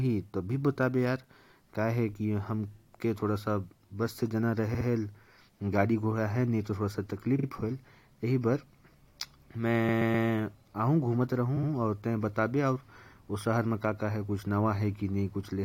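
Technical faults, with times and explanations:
4.74–4.86 s, 7.38–7.47 s, 9.88–10.26 s and 11.56–11.69 s, repeated frames: a short block of the speech plays again and again, making a stutter. The blocks last 64, 43, 128 and 64 ms, replayed two, two, three and two extra times. This fits stretches of a few compressed frames being stored or sent more than once, adding about 0.73 s overall.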